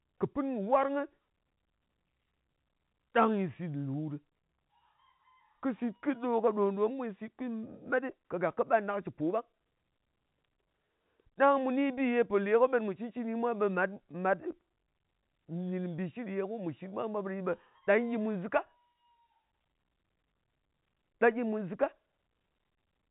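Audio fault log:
No faults heard in this telephone-band speech recording.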